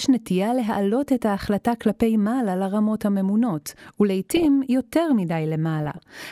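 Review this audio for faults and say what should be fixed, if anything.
DAB burbling at 4.26–4.45 s and 5.83–6.03 s: weak reception let bit errors, under one percent, corrupt the MP2 audio data, so single sub-bands get short blips of noise rather than drop out. Prevent it with a stronger signal, a better antenna, or a higher-protection DAB error-correction profile.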